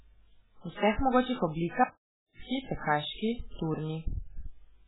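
From the first moment to the last, the speech carries heavy codec damage: it sounds watery and swirly, with consonant attacks smeared and s sounds turned to metallic chirps. On a spectrogram nothing appears above 3.8 kHz, a flat ceiling across the whole clip, and below it the weak components flicker on and off in patchy blocks from frame to frame. This is likely MP3 compression at a very low bitrate, in line with roughly 8 kbps.

At 1.84 s the speech cuts out mid-flow and returns at 2.40 s, leaving about 0.56 s of dead silence with no room tone underneath. The waveform drops abruptly to a flat line over that stretch, and the spectrogram shows a blank vertical band across all frequencies. Whatever was being said in that gap is gone, consistent with an audio dropout to silence, likely from a momentary loss of the input while recording continued.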